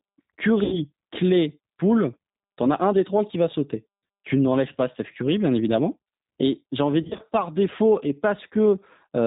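It's a speech clip that's been through the G.729 codec the whole way, and you can plainly hear it. Everything above 4 kHz is gone, so it sounds boxed-in and narrowband, with that slightly rough, synthetic edge you get when each 10 ms frame is rebuilt from a vocal tract filter, a pitch predictor and a handful of pulses rather than the actual waveform. The sound fits the 8 kbit/s G.729 rate. On top of that there's VoIP packet loss concealed by the speech codec in two spots. From 0.64 to 0.79 s about 80 ms of audio is missing, which fits four lost packets, and the decoder fills the gap by stretching its last pitch and filter into a buzzy tone or a coloured noise that fades. The second hit runs from 7.03 to 7.21 s, between "j'ai envie" and "par défaut et". About 100 ms is lost there, spread over 160 ms with no single gap longer than 40 ms. Because each frame builds on the one before, the sound stays weak or distorted for a moment after the packets come back.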